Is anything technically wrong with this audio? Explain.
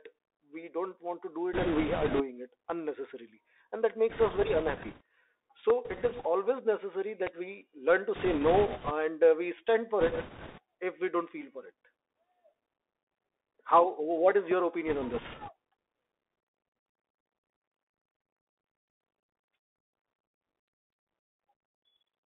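Yes. The whole recording has gone through a Bluetooth CVSD headset codec, with bursts of bit errors on that Bluetooth voice link and three loud pops on top.

Bluetooth CVSD headset codec, throughout: the audio is confined to roughly 300 Hz to 3.7 kHz, which fits a 64 kbit/s CVSD headset link. The coder sends one bit per sample, stepping the waveform up or down with an adapting step size. The damage is plainly audible: sibilants turn scratchy, loud bright passages distort where the step can't keep up, and a grainy hiss sits under the speech. On a spectrogram there is a hard ceiling near 3.7 kHz with nothing above it, plus a granular noise floor across the band.

Bit errors on a Bluetooth voice link, in six bursts: 1.53 to 2.23 s, 4.10 to 5.01 s (right after "it unnecessarily and that"), 5.85 to 6.26 s (just before "always necessary"), 8.15 to 8.92 s (between "we learn to" and "uh we stand"), 10.01 to 10.60 s, and 14.87 to 15.53 s. 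Flipped bits each nudge the delta-modulated waveform by only one small step, and the error fades out, so there are no clicks. Instead there is a rushing, crackly noise. It is heaviest in the first burst, where the error rate sounds near 10 percent, and lighter, 3 to 7 percent, in the others. A spectrogram shows these spans as broadband speckle filling the band, and the waveform looks fuzzier there.

Loud pop, at 5.70 to 5.72 s, 7.27 to 7.29 s and 14.51 to 14.54 s: each is a single sharp pop lasting about 23 ms and peaking about 15 dB above the speech, which carries on beneath it. The likely cause is an electrical transient, such as a connector, switch, static discharge or driver glitch, shaped by the following circuitry. On the waveform each one is a tall narrow spike standing well above the surrounding level. On a spectrogram it appears as a thin vertical stripe across the whole band.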